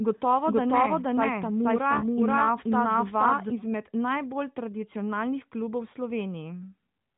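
From the start to 3.5 s, a doubled audio track, likely from a second capture path, plays the speech again about half a second later at about equal level. On a spectrogram every pattern repeats shifted right, and the copy stops abruptly at 3.5 s.

From 3.63 to 3.75 s, just before "najbolj tradicionalnih", AMR bit errors make the narrowband voice hoarse and gargly. This fits six damaged 20 ms frames. The spectrogram shows smeared, noisy harmonics below 4 kHz.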